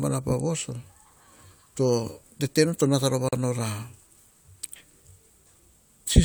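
At 3.29 s there's a gap at a join of encoded pieces: the speech drops out for about 41 ms, ending at 3.33 s. It sounds like a brief hole with slightly smeared edges, then picks up right where it left off, because encoder delay and end padding at the seam weren't trimmed.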